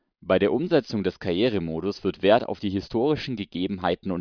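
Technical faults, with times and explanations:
Nothing in this speech recording stood out as a technical problem on listening.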